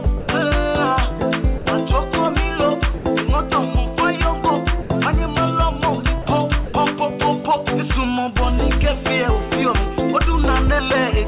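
A sender's voice detector likely misjudged the audio as background and stopped transmitting. This sound dropped by the voice detector gives way to steady comfort noise at 0.04–0.06, 0.20–0.28, 1.58–1.66, 2.98–3.04, 4.82–4.90, 6.22–6.26 and 6.66–6.74 s, gaps of 20 to 80 ms. The audio, band-limited to 4 kHz by the call path, returns when the detector reopens.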